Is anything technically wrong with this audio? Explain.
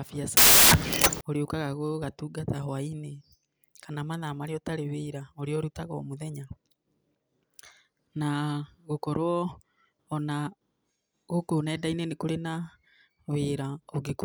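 Yes, there's one clear problem near the start. From about 0.37 to 1.21 s the speech is buried under a burst of loud, harsh broadband noise, just before "ũrĩũkaga gũgatungata hwainĩ". That's samples built from the wrong bytes: the reader assembled each sample with its bytes misaligned or swapped, so the rapidly fluctuating low-order bits ended up as the big part of every value. The result is harsh broadband hiss for that stretch.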